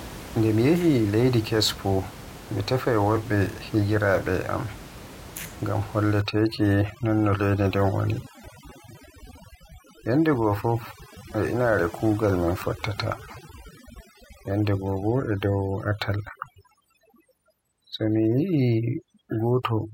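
From 6.22 s to the end, the background collapses to near silence flecked with twinkling specks. This is overdone noise removal: a noise reducer set far too strong cuts every band near its noise estimate, taking quieter speech detail too. Before 6.22 s, room noise sits about 17 dB below the speech.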